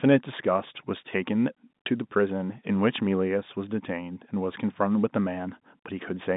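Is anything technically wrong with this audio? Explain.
No, nothing is technically wrong with this audio.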